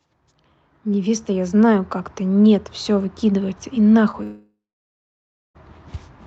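Short concealed packet loss occurs from 4.11 to 4.15 s. About 20 ms of the speech never reached the decoder in time, so the receiver extended the preceding sound to fill the gap and blended back into the real signal, leaving a brief smear or wobble.

A long network dropout follows from 4.23 to 5.57 s, likely caused by the connection stalling for more than a second. The receiver first continues the last sound as a fading buzz or hiss, then about 1 s of near-silence remains. When the speech returns, the lost stretch is gone, and the band above 8 kHz is missing, consistent with the Opus call path.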